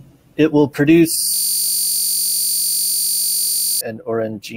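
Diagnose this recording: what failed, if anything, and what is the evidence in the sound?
What failed is the driver or buffer stage, a system hang loop. Right after "will produce", at 1.34 s, the speech stops and becomes a steady buzz that lasts until 3.81 s. That buzz is one 21.33 ms slice of audio repeating over a hundred times at 46.9 Hz, which fits a 1024-sample buffer. The host froze while the sound hardware kept cycling through the same stale ring buffer.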